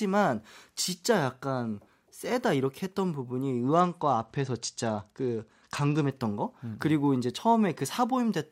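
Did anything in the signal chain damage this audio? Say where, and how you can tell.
Yes, a Bluetooth SBC bit pool drop in the codec stage, from 3.76 to 6.11 s. The speech turns dull and gritty as treble sub-bands starve, which fits a cut from 28 to about 11 (roughly 90 kbps). Unlike packet loss, there are no gaps.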